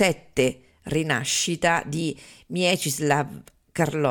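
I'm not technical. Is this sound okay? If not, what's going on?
No. At about 1.31 to 1.34 seconds, the speech has a corrupt frame decoded. The audio is stored as small compressed blocks called frames, and in a few of them some bits were damaged. The player decoded those blocks anyway, and the garbled data put sound energy at the wrong pitches for a few hundredths of a second. It comes through as a brief chirp, squeak, blip or burst of noise in the speech.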